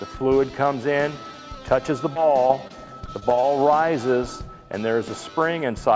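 From 2.14 s to 3.45 s the audio suffers repeated packet loss, giving a choppy, robotic sound. Over that stretch there are seven short holes, none longer than 23 ms, and each is patched by carrying the preceding sound forward. About a tenth of the stretch is this concealment rather than real signal. On a waveform the holes appear as brief runs of repeated cycles. On a spectrogram they show as short smeared patches where detail breaks up, all below the 8 kHz ceiling of the G.722 call codec.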